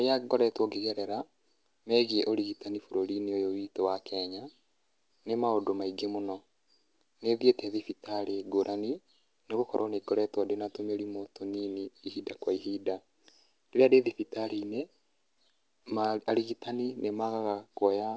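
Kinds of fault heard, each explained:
No faults can be heard in this speech.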